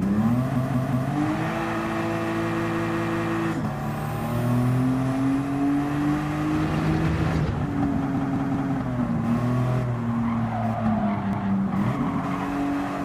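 At 0.56 to 1.12 s, 2.60 to 3.34 s, 8.17 to 8.73 s and 11.33 to 11.52 s, a repeated buffer stutters. Each time, one 186 ms slice, which fits an 8192-sample buffer, plays again three, four, three and then one extra time, with a hard join at every repeat. A dropout leaves a silent gap instead, but here the same sound returns and the flow simply stalls.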